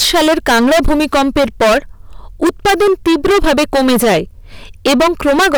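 Hard clipping runs through the whole speech clip: overdriven by about 21 dB, roughly a third of the waveform gets sliced flat, so every loud syllable turns into harsh fuzz.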